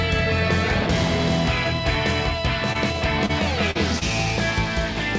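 Short concealed packet loss occurs at 2.73 to 2.77 s, 3.26 to 3.31 s, 3.71 to 3.77 s and 3.99 to 4.03 s, each 20 to 40 ms of missing audio patched by extending the preceding sound. Each sounds like a brief smear or wobble rather than a hard dropout or click, which distinguishes it from plain gaps. The G.722-style band limit at 8 kHz is heard throughout.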